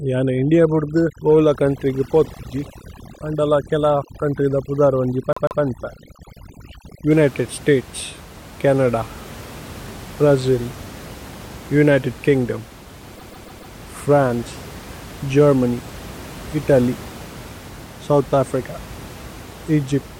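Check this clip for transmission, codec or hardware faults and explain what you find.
Two faults are present: overdone noise removal at the start and two repeated-frame stutters. The room noise underneath, about 19 dB below the speech, is part of the recording.

From 0.0 to 7.11 s there is overdone noise removal. A noise reducer set too aggressively is switching off individual frequency bands that sit near its noise estimate, taking quieter speech components with them. The background drops and breaks up into twinkling specks.

Repeated frames appear at 5.32 to 5.61 s and at 13.14 to 13.72 s, right after "ഉനിതേദ് കിന്ഗ്ദോമ്". The decoder replays a duplicated 144 ms block, twice in the first case and four times in the second. This produces an audible stutter and adds 288 ms and 576 ms of playing time.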